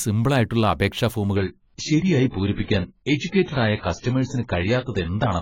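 At 1.36 s the speech drops abruptly in quality, with no gap, and stays degraded to the end. This is an adaptive stream at a lower bitrate. Nothing above 7.5 kHz remains. The dull, smeared sound fits a switch from 96 to 12 kbit/s AAC.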